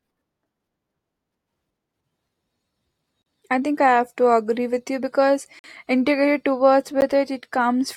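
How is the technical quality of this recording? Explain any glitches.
The speech has three blocks of digital silence: 3.22 to 3.26 s before "I think I", 5.59 to 5.64 s after "with you because", and a brief tick at 7.01 s after "you because integrated towards". The sound drops abruptly to silence, as when the output buffer isn't filled in time. The waveform shows flat lines, and a spectrogram shows blank vertical stripes.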